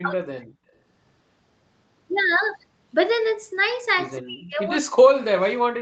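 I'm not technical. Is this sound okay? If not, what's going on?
No. Speech suppressed in double talk: the call's echo canceller likely mistook the voice for echo and turned it down, so it nearly vanishes from 0 to 0.47 s and from 4.19 s to the end.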